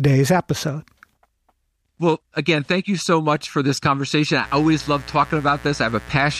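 From 4.41 s, right after "much for this conversation", a raspy mains buzz on 60 Hz harmonics sits roughly 20 dB below the speech until the end.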